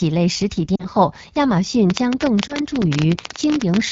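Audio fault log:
Throughout: AMR wideband (HD Voice) codec, with plainly audible rough, raspy speech, which fits a low rate near 8.85 kbit/s, where the vocal tract model lacks detail.
0.76 to 0.87 s and 2.47 to 2.56 s: lost AMR speech frames. The sound dips toward near silence for about 40 ms, then 20 ms, as the decoder reused the last good settings with falling gain.
1.90 to 3.92 s: train of clicks, an irregular ticking of around 14 per second, roughly 30 in all, standing well above the speech. A likely cause is interference or a faulty connection or supply.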